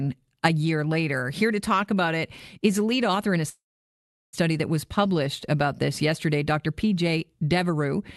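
At 3.49 s, right after "lead author in a", the speech stops for a call audio freeze that lasts until 4.35 s, when it resumes with "that was published about". The likely cause is packets held up in transit, leaving the jitter buffer empty. A brief fading buzz or hiss continues the last sound, then about 0.74 s of silence follows, and nothing is lost, only delayed. On a spectrogram, a short smeared tail drops into a blank column. The audio above it is cut off near 12 kHz, consistent with an Opus call path.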